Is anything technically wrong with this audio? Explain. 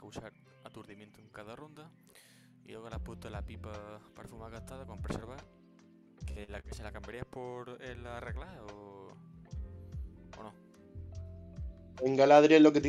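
Yes, there are three brief faults clustered between 6.31 and 6.79 s.

At 6.31 to 6.39 s and again at 6.44 to 6.51 s there is a short smear or wobble. This is short concealed packet loss: about 40 ms went missing each time, and the receiver covered it by extending the preceding sound.

From 6.60 to 6.79 s a sound is held about 44 ms too long. This is a short stall from a late packet: the jitter buffer ran dry and the last sound was stretched until the data arrived, so nothing is lost.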